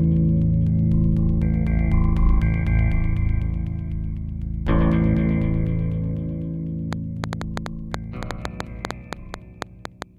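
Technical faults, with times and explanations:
6.93 to 10.03 s, train of clicks: about twenty sharp, similar-shaped ticks at roughly 5.5 per second, unevenly spaced, standing about 15 dB above the sound and audible through quieter stretches too. That pattern points to likely interference from nearby equipment or a faulty connection or power supply injecting repeated pulses.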